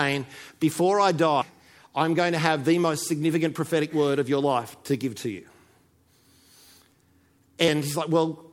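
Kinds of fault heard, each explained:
Compressed frames skipped: Whole frames of the coded speech never reach the output. At 1.41 s, just before "I'm going to have", about a fifth of a second vanishes. The jump fits several 24 ms frames.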